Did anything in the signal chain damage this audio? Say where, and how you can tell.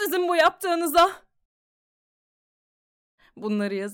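No, nothing in the signal chain audibly damaged this audio: level, continuity and timing stay steady throughout, with no sign of trouble at any stage.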